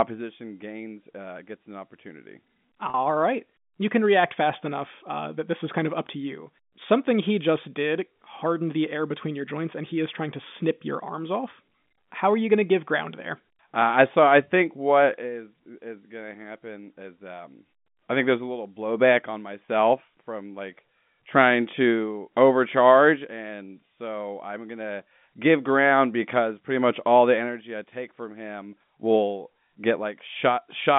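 Speech over a G.711 telephone line, passing roughly 150 Hz to 3.6 kHz, with packet loss with pitch repetition. Audio dropped at 2.90 to 2.94 s, after "uh gets an opportunity", a 40 ms gap that fits two 20 ms packets. A second 20 ms gap at 19.66 to 19.68 s falls between "a little blowback on" and "from like trying to". In both gaps the receiver looped the last pitch period, leaving a brief buzzy, held sound.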